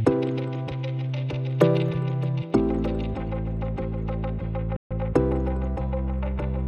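At 4.76 s the sound stops dead in mid-flow. This is a playback stall. The output stays silent for about 140 ms, until 4.91 s, then carries on. The likely cause is the player running short of data or its thread being blocked.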